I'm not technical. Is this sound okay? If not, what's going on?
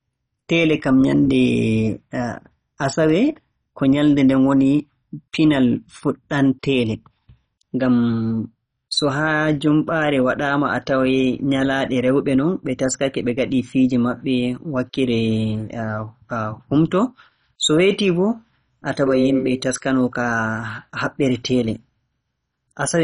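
No. MP2 compression, throughout: the speech sounds dull and gurgly, likely from heavy data-squeezing that cuts everything above 10.4 kHz and coarsens what remains.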